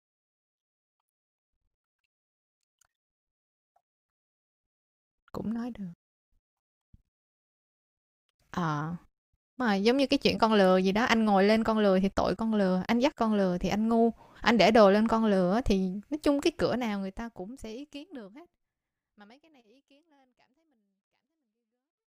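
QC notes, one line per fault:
No faults heard in this speech recording.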